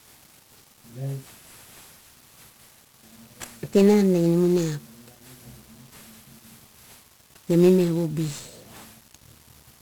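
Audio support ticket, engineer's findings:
Fuzzy, crackly speech across the whole clip; treble buried under broadband hiss. Component: encoder, 1-bit DFPWM compression. Mechanism: one bit per sample nudges an adaptive level up or down, producing dense quantisation noise. Heavy damage, which fits a 48 kbps stream.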